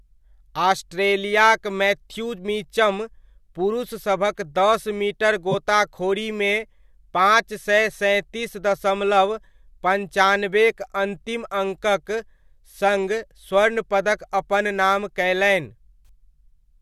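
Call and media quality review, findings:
Corrupt frame decoded at 5.51 to 5.55 s: a short squeaky burst, about 36 ms, peaking around -10 dBFS. Sounds like flipped bits in one compressed frame that the decoder played anyway. Misread gains or codes threw energy into the wrong frequencies for roughly one frame.

Corrupt frame concealed at 16.06 to 16.09 s: a brief concealed stretch in the speech, about 26 ms. The decoder caught the damage and covered it with a mute or a scrambled copy of the previous good spectrum. The length fits a single frame.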